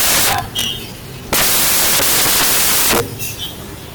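From the first sample to the last, the speech is buried under loud, broadband hiss: samples built from the wrong bytes. The reader assembles each sample with its bytes misaligned or in swapped order, so the rapidly fluctuating low-order bits land in the most significant position and dominate every value. The result is dense, near-white noise at high level on the louder passages.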